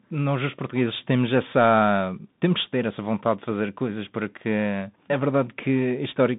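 Throughout, the speech carries Bluetooth CVSD headset codec damage: band-limited to roughly 150 Hz–3.7 kHz, nothing above 3.8 kHz, scratchy sibilants and granular hiss from the one-bit delta coding.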